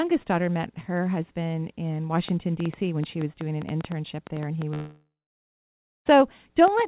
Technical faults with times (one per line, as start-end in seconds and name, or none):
2.29-6.88 train of clicks
4.74-6.07 long network dropout